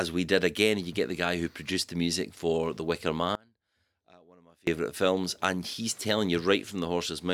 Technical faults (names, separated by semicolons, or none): audio dropout to a faint residue